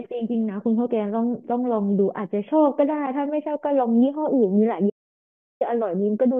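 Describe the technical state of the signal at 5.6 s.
At 5.6 s you're right at the tail end of an audio dropout to silence running from 4.90 to 5.61 s, about 0.71 s of dead silence with no room tone. The speech just stops and then snaps back, most likely because the input link briefly failed while recording continued.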